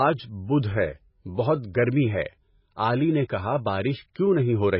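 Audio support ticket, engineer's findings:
Watery, swirly speech, heavy smearing, nothing above 5.5 kHz. Likely MP3 compression starving weak frequency lines and cutting the treble, consistent with a very low bitrate near 16 kbps.

Brief hiss before an attack at 4.14 s, onset softened. Pre-echo: transform-codec quantisation noise spread across the block, about 19 ms ahead of the transient.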